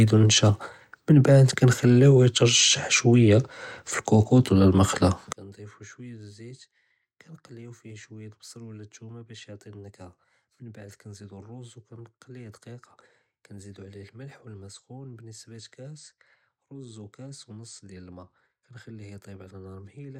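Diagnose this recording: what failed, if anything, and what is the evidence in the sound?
One channel inverted, from 5.33 s to the end, just after "וּלָא אֶלְמֶקְלָה": the speech drops by about 25 dB and turns faint. The likely cause is reversed polarity on one stereo leg in the analogue wiring, so the centred voice cancels when summed to mono.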